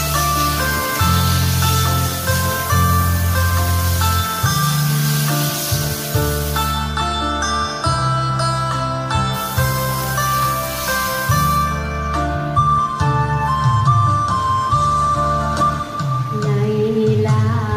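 Nothing is technically wrong with the audio.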